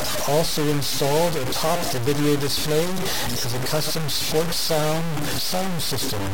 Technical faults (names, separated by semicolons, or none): low bit depth without dither